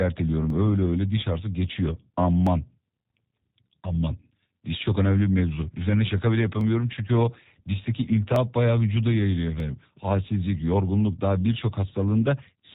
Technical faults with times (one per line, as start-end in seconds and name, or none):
0.00-12.74 G.729 codec
0.50 dropped samples
2.47 dropped samples
6.61 dropped samples
8.36 dropped samples
9.60 dropped samples